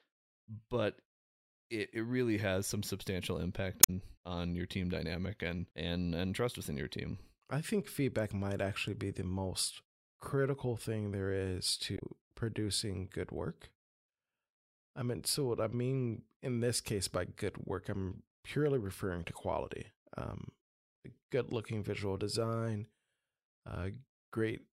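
Damaged data in a compressed stream breaks into the speech twice, from 3.80 to 3.90 s and again from 11.95 to 12.02 s. At each point part of the encoded stream is wrong, so the decoder misreads those frames, loses sync and hunts for the next valid frame header before playback recovers. Each episode is heard as a short chirp, squawk, click or hole, about 0.1 s and 0.07 s long respectively.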